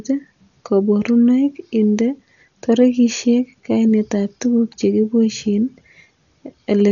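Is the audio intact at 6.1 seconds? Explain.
No. At 6.1 seconds, as throughout the clip, the speech carries heavy damage from what is likely Dolby Digital compression, with a starved bit budget that fits roughly 48 kbps. The encoder has cut the band at 7 kHz and left many frequency lines without mantissa bits, so the decoder fills them with dither noise. It sounds dull, with rough, fluttering noise around voiced tones. A spectrogram shows a hard ceiling at 7 kHz and grainy, patchy energy below it.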